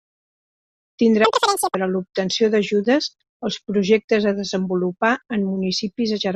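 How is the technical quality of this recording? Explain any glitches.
The speech has one glitch. From 1.25 to 1.75 s, audio is read two samples at a time (double speed). Pairs of samples become single frames. The voice jumps an octave up, twice as fast.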